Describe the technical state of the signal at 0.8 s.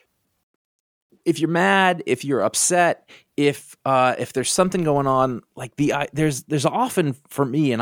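At 0.8 s the speech signal is intact, with no audible technical fault at that moment.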